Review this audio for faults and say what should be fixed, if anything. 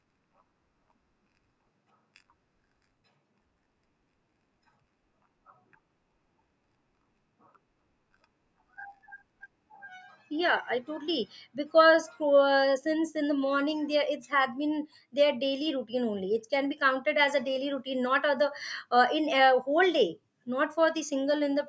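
Nothing in this recording needs fixing. No faults can be heard at any point in the speech, so no correction is called for.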